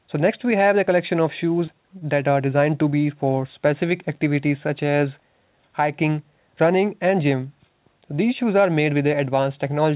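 At 1.66 s and again at 1.99 s there is short concealed packet loss: about 20 ms of the call arrived too late, and the receiver extended the preceding sound across the gap before blending back. Each is a brief smear rather than a silent dropout or hard click, heard through the narrowband G.711 call path with nothing above 4 kHz.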